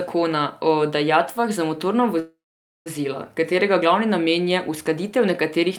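At 2.19 s, right after "o dajatvah za motorna", the speech stalls into a short fading buzz, then about 0.51 s of silence until 2.88 s: a call audio freeze, likely from delayed packets draining the jitter buffer. The waveform shows a flat gap, the spectrogram a smeared tail, and speech resumes intact, about 0.67 s late.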